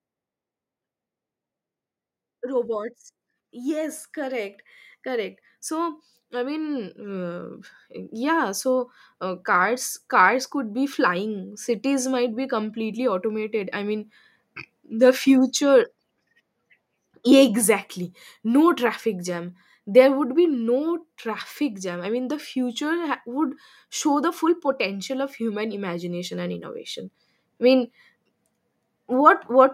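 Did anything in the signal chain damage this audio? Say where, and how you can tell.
Yes. Call processing applied automatic gain rising from 2.4 s to 14.0 s: the speech and the background noise floor swell together by about 13 dB. The AGC judged the input too quiet and ramped its gain up slowly, lifting everything equally.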